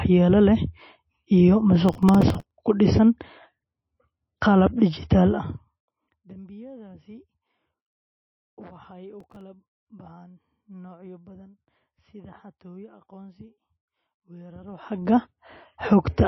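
Throughout the speech, the sound is watery and swirly, with smeared consonant attacks and nothing above 5.8 kHz. The likely cause is MP3 compression at a very low bitrate, fitting something near 24 kbps, where the encoder drops the treble and lets weak frequency lines flicker between frames.

From 1.89 to 2.51 s, a burst of processor overload crackle tears through the audio. Many consecutive buffers of a few milliseconds each miss their deadline, and stale fragments replay with hard edges. Unlike the codec's even swirl, this is a sudden gritty roughness that stops abruptly.

From 5.24 to 6.01 s, zipper noise accompanies a drop of about 25 dB. The gain falls in 2 dB steps, roughly 15 per second, with no smoothing, so each step clicks. The result is a regular tick rate that follows the level change rather than random grit.

The overload crackle returns briefly from 9.20 to 9.41 s, between "waxay u" and "baxaan noocyo badan sida". 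It is a shorter tear of about ten missed buffers, each replaying old audio.

From 14.62 to 15.11 s, zipper noise returns as the level rises by about 25 dB in 2 dB steps. The steps come faster here, near 30 per second, so the ticking becomes a quicker zip.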